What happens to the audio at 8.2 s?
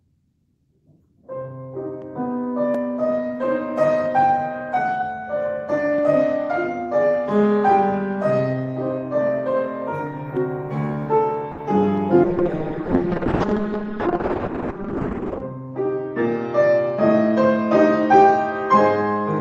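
Nothing goes wrong at 8.2 s; the audio plays through that moment intact, with no dropout, click, glitch or other fault.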